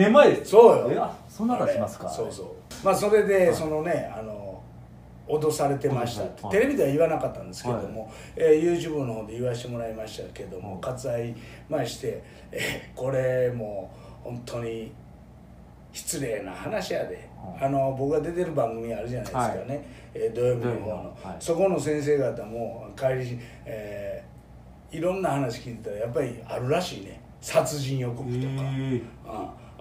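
No technical faults can be heard anywhere in the audio. Nothing in it calls for a timestamp or a note on what went wrong.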